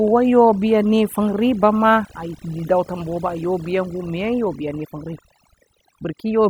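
From start to finish, the speech carries overdone noise removal: a noise reducer set far too aggressively has pulled down individual frequency bands whenever they dipped close to its noise estimate, taking the softer parts of the voice along with the background noise. The gaps fall to near silence sprinkled with twinkling specks. Unlike a noise gate, which shuts everything at once, this works band by band, so the residue glitters rather than cutting cleanly.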